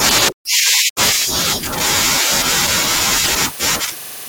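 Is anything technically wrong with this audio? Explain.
Yes. From 3.21 to 3.29 s, damaged data in the compressed stream corrupts frames; the decoder loses sync and hunts for the next header, producing a brief chirp or squawk.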